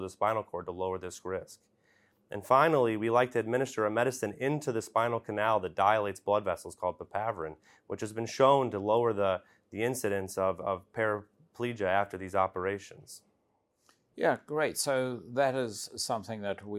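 A speech recording with no technical faults to report. Nothing in it calls for a time stamp or a cause.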